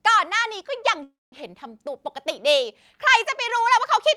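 At 1.03 s the speech halts in a call audio freeze lasting until 1.34 s. The last sound is carried on as a fading continuation, then about 190 ms of silence, before speech resumes exactly where it stopped. Nothing is lost, but everything after lands about 287 ms late. The likely cause is delayed packets emptying the jitter buffer. A spectrogram shows smeared horizontal bands decaying into a blank strip, and the waveform shows a shrinking tail and then a flat line.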